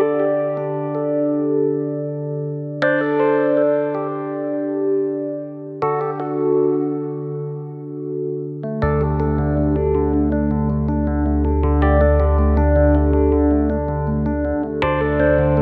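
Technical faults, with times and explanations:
Listening through the whole clip turns up no technical faults. There is nothing in the audio that calls for a time or an explanation.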